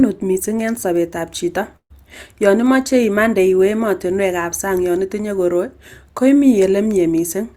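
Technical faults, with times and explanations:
1.76–1.91 s, burst of packet loss: about 140 ms of audio never arrives, so the receiver extends the last sound as a held, fading fill that sinks toward silence. Playback then resumes further on with that stretch gone, not delayed as in a simple pause.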